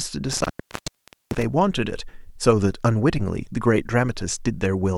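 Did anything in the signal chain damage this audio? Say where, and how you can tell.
Yes: intermittent contact in the analogue wiring, 0.33 to 1.43 s. A loose connection opens, cutting the speech out for 0.87 s with crackle at the edges.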